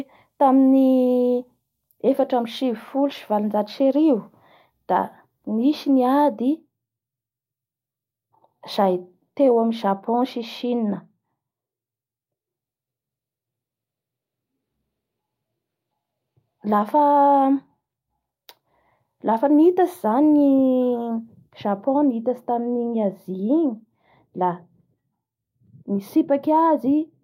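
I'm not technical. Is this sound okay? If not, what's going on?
Yes, nothing stood out as wrong when listening to this recording.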